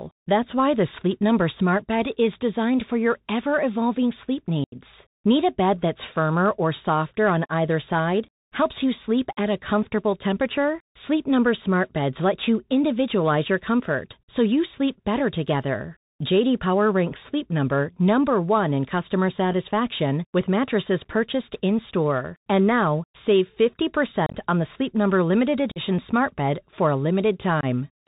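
Throughout, the speech carries the Bluetooth CVSD headset codec at 64 kbps, with plainly audible damage. Its one-bit delta coding cuts everything above 4 kHz, roughens s sounds and lays a granular hiss under the voice. That grit marks it apart from the smeared, warbly sound of transform codecs.

Unconcealed Bluetooth headset packet loss opens gaps at 4.64 to 4.76 s, right after "your ever evolving sleep", with about 80 ms lost, likely around ten packets. Further gaps come at 24.26 to 24.37 s, where 60 ms drops out in pieces across 75 ms (the longest run is 30 ms), at 25.71 to 25.79 s, where 45 ms goes just before "smart bed for a", and at 27.61 to 27.65 s, where 22.5 ms is lost. Nothing fills the holes, so their edges are abrupt and the speech returns briefly quieter. Concealed loss would repeat or smooth over audio instead.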